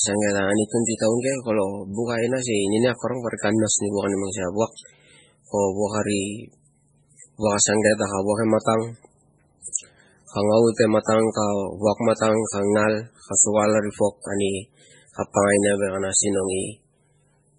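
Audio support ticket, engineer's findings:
Nothing above 10.4 kHz. Watery, swirling texture throughout, metallic chirps on s sounds, smeared attacks. Cause likely MP3 compression at a very low bitrate, around 16 kbps. Encoder short of bits, cutting the treble, switching weak spectral lines on and off between frames.

Pre-echo, 9.62 to 9.65 s. Short hiss about 30 ms ahead of a sharp attack, which sounds softened. Transform-codec block at fault: quantisation noise sized for the loud onset spreads across the whole block, filling the quiet moment before it.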